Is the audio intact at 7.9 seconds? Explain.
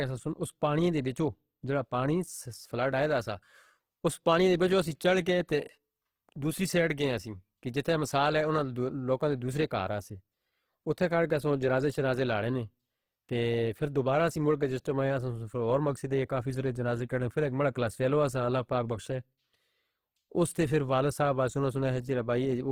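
No. Throughout the clip, including 7.9 s, the speech was likely passed through Opus compression in its CELT mode, at a rate fitting about 16 kbps. Starved bands get filled with folded or noise content, so the sound turns plainly grainy and rough, though it still extends to about 20 kHz.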